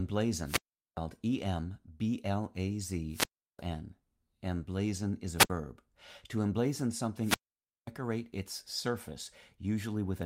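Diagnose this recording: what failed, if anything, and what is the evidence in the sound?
Wireless microphone squelch dropout in the radio link: at 0.44–0.97 s, 3.09–3.63 s, 5.37–5.50 s (after "is a") and 7.20–7.91 s, the fading RF carrier lets the receiver's squelch mute the output for 0.41, 0.35, 0.07 and 0.53 s, showing as flat waveform gaps and blank spectrogram columns.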